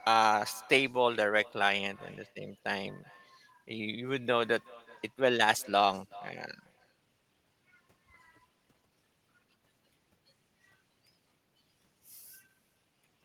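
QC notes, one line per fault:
Throughout: echo with no canceller. Every phrase gets a faint, thin copy trailing it by something like 400 ms, sitting about 24 dB below the direct speech. That's the far end playing the call out of a loudspeaker, their mic catching it, and nothing in the chain subtracting it before it's sent back. So the talker hears themselves return after the network round trip, quieter and thinner.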